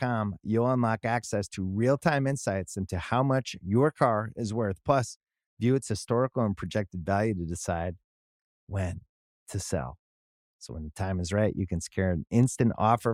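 No technical faults can be heard in this recording.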